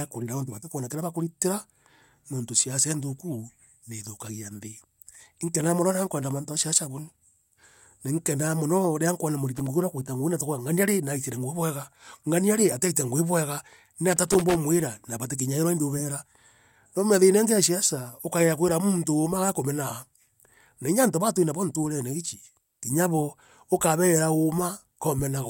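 A speech clip with loose connector crackle, heard twice: 9.55 to 9.67 s, right after "riria nkwona", and 14.12 to 14.55 s, right after "rii ataitire ngui bwega". A worn contact breaking intermittently chops the signal, so the waveform shows ragged dropouts and spikes and the spectrogram shows scattered broadband vertical streaks.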